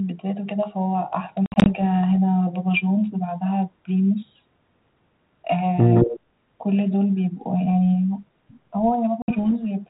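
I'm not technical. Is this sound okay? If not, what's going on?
No, there are a few glitches.

The first is packet loss on an ADPCM call. Between 1.46 and 1.68 s, several short bursts of sound drop out to silence, about 120 ms missing in total, with the longest gap around 60 ms. That points to a handful of small chunks going missing in transit. Because this kind of phone coding predicts each moment from the one before, the receiving end briefly loses track. The sound comes back slightly rough and settles within a few tens of milliseconds.

The same thing happens again from 9.22 to 9.52 s. This time only about 60 ms goes missing, which fits roughly three lost chunks, followed by the same short, rough recovery.

Around 5.95 to 6.2 s there's an echo leak. A second copy of the voice comes in roughly 165 ms behind the original and is about as loud, so it sounds like a quick doubling. The likely cause is a speakerphone on one side of the call whose echo cancelling didn't catch everything its microphone picked up, so part of the sound was sent back.

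Inside that same moment, from 6.05 to 6.13 s, the speech is suppressed in double talk. The voice dips a little for about 70 ms in total, a modest drop rather than a full cut. This likely happened because both sides were sounding at once, and the echo canceller couldn't separate its own talker from the loudspeaker echo, so it turned everything down briefly.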